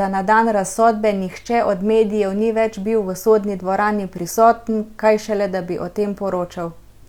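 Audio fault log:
No fault in this speech clip.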